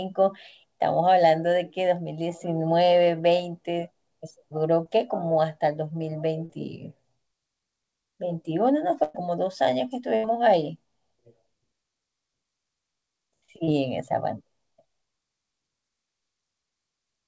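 Brief smears at 4.84–4.87 s and 6.45–6.51 s are short concealed packet loss: 20 ms and 40 ms never arrived, so the decoder stretched the preceding sound across each gap.

At 9.03–9.16 s and 10.16–10.27 s the last sound is held and fades away, then the audio resumes further on. This is a burst of packet loss. About 120 ms and 80 ms went missing, and the receiver continued and faded the last sound.

At 13.64–13.74 s another short smear marks a further short concealed packet loss. About 40 ms was lost and filled from the preceding sound, stretching it slightly.

Throughout, nothing is present above 8 kHz, which fits a G.722 call codec at 64 kbps.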